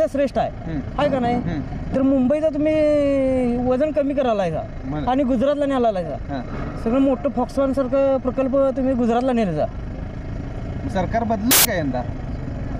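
At 11.51 s, for about 0.14 s until 11.65 s, samples built from the wrong bytes burst out as loud, harsh broadband noise: misassembled bytes turn fast-changing low bits into the dominant part of each value. A spectrogram shows a full-band block; the waveform shows a dense slab.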